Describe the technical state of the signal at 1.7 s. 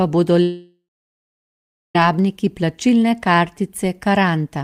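At 1.7 s the signal sits inside a long network dropout running from about 0.42 to 1.96 s, likely caused by a network stall that stopped audio arriving. The last sound is stretched into a fading buzz or hiss for roughly 0.4 s, then about 1.1 s of near-silence follows, so 1.7 s falls in that near-silence. Unlike a brief packet glitch, the concealment gives out entirely, and when the speech resumes about 1.5 s of content is simply gone.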